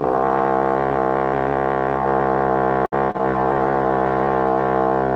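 From 2.85 to 3.21 s, repeated packet loss makes the sound choppy and robotic. Four gaps, the longest 66 ms, are patched with smeared repeats that show as flat, striated blocks on a spectrogram.

A call bitrate drop follows from 3.32 to 4.77 s. The sound turns coarse and watery, pointing to roughly a 12 kbps rate. On a spectrogram the top edge falls from 20 kHz to a hard ceiling at 12 kHz.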